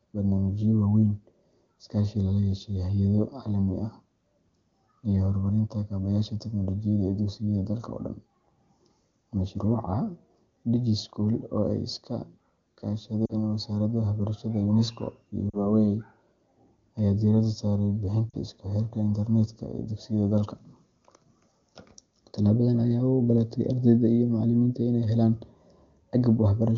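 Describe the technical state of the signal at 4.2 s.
At 4.2 s the audio is intact, with no dropout, clipping or other fault, and the speech carries the clean, full wideband character of an AMR-WB call at a high rate, consistent with about 23.85 kbit/s.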